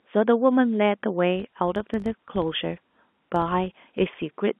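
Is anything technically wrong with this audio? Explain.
Yes. From 1.36 s to 4.25 s a steady 50 Hz buzz rides on the speech, swelling and fading with its loudness, as if a rough hum were stamped onto every syllable. This is a filter restarted on every block: the filter discards its memory at each block boundary and begins from silence, so each block opens with a small transient. Repeating 50 times a second, those transients fuse into the buzz, which fits 20 ms blocks. Under the buzz, the narrow telephone band of the G.711 coding comes through as expected.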